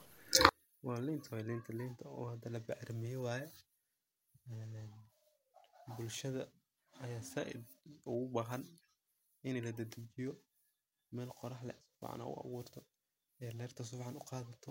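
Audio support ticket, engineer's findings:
Likely one channel inverted: polarity flip on a single stereo leg somewhere in the path. Mono sum from 0.49 s to end at 14.70 s: centred speech cancels, level drops about 39 dB, leaving only a faint residue of channel difference.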